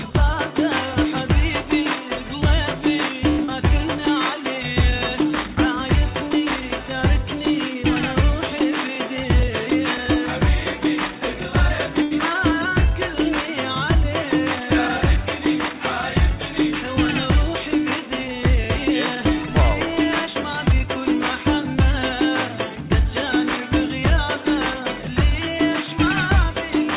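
A short stall from a late packet comes at 3.3 to 3.4 s, heard through a narrow call path with nothing above 4 kHz, which fits G.711 A-law at 64 kbps. A packet arrived late, the jitter buffer ran dry, and the receiver drew out the last sound for 80 ms before resuming where it had stopped. Nothing is lost, but the sound hangs unnaturally long, with a faint buzzy or dipping quality, and the playback falls 80 ms further behind.

Right after, at 3.44 to 3.50 s, comes a short concealed packet loss. About 40 ms of audio never arrived in time, and the receiver covered the gap with 38 ms of synthesised continuation, extending the preceding pitch or shaped noise, then blended back into the real signal. It comes across as a quick smear or wobble.

A jitter buffer speed-up runs from 9.1 to 9.96 s. With more audio queued than the buffer wants, the receiver repeatedly trimmed out pitch-period-sized slices, removing around a twentieth of a second in total. 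Playback runs at about 105% of normal speed while the pitch stays put, so this stretch sounds slightly rushed.

A second short stall from a late packet falls at 12.03 to 12.13 s. Again the buffer emptied while waiting, and the last sound was stretched for 84 ms before continuing seamlessly from the same point. The held, faintly buzzing sustain returns, and the delay grows by 84 ms.

A second jitter buffer speed-up spans 20.27 to 20.84 s, at about 106% speed. The receiver dropped short pitch-length pieces over and over to work the extra buffered audio back down, cutting out roughly 40 ms. The pitch is unchanged, but the pacing tightens audibly and the passage feels hurried.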